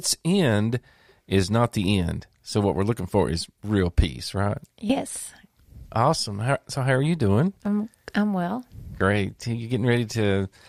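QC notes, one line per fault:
No faults to log for this speech clip. Nothing heard here calls for a QC entry.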